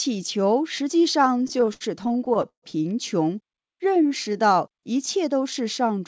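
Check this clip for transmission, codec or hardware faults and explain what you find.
Two faults are audible, on top of a call path that cuts off everything above 8 kHz, which fits a G.722 wideband codec.

Repeated stalls (stutter), 1.38 to 2.64 s: packets kept arriving late, so the jitter buffer drained over and over. The receiver stretched the last sound through each gap, the longest 134 ms. About 364 ms was filled this way and nothing was lost, so the sound drags and stutters.

Jitter buffer slow-down, 3.71 to 4.70 s: the buffer was rebuilding its reserve by repeating single pitch periods many times in a row, adding 93 ms. The sound runs at 91% speed without any pitch change, so it comes across as drawn out.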